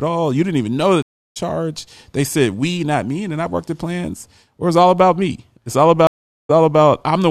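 A speech clip with two stream reconnect faults. At 1.02 s, just after "didn't even know that", the sound drops out for 333 ms. It returns around 1.38 s, roughly 0.4 s further on. At 6.07 s a second gap of 422 ms follows. The sound resumes near 6.51 s, about 0.3 s ahead. Each time the connection broke and the player rejoined a live stream. A fresh decoder started mid-stream, so the first frame fades back in.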